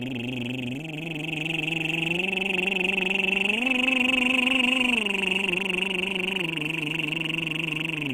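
All the way through, the music has two layers of coding artefacts stacked together, likely from transcoding between lossy codecs, something like a Vorbis pass near 71 kbit/s and then Opus near 48 kbit/s. The later stage spends bits on the earlier one's artefacts and adds its own, and nothing survives above 20.2 kHz.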